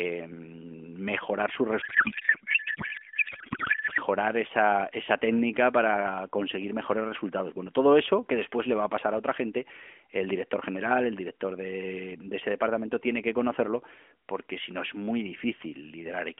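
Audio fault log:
1.82 to 3.99 s: codec payload misread. The speech turns into garbled noise and warble that barely tracks it, which points to octet-aligned AMR frames being unpacked as bandwidth-efficient, so every field lands in the wrong place until the packing matches again.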